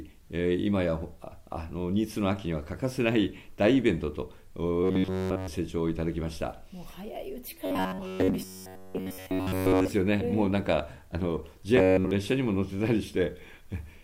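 From 4.84 to 5.48 s, 7.66 to 9.90 s and 11.77 to 12.11 s the sound takes on a rigid, metallic buzz at a fixed 93.8 Hz: robotic sound from repeated short buffers. The likely cause is audio arriving too late, so a segment of about 10.7 ms is looped in place of the missing material. The first and last stretches are repeated throughout, and the middle one mostly. Unlike a stutter, the loop is too short to hear as repeats and fuses into a steady pitch.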